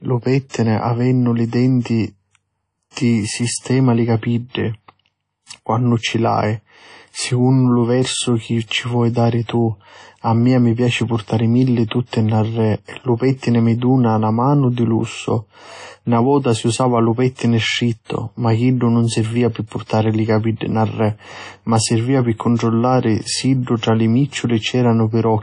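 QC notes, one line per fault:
Throughout: WMA compression. The speech sounds washy and ringing, with a hiss that swells and fades along with the voice, and nothing is present above 10.1 kHz. This fits a low-bitrate transform codec, likely WMA at around 32 kbps, zeroing weak components and smearing quantisation noise across long blocks.
0.49–0.54 s, 1.80–1.85 s, 23.77–23.83 s: pre-echo. A brief hiss arrives just ahead of each sharp onset, lasting 46 ms at the first and 57 ms at the other two, so the attacks sound softened. The codec spread noise meant for the loud attack back across the quiet start of its block.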